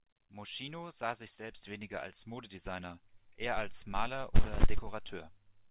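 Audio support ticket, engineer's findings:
No faults found: speech passes through the call path with no energy above 4 kHz, consistent with G.711 mu-law narrowband coding at 64 kbps, and no dropouts, clicks, level jumps or timing disturbances are heard.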